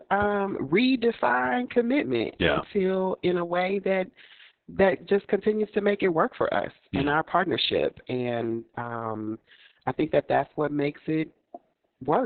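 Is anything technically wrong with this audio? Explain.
Yes. Throughout the speech there is heavy Opus voice compression. The SILK predictive coder has narrowed the band, so a spectrogram shows nothing above 4.3 kHz, and coarsely quantised excitation leaves the speech muffled, hoarse and slightly robotic, which fits a very low bitrate around 6 kbps.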